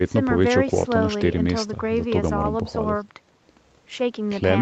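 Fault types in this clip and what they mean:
No technical faults can be heard in this recording.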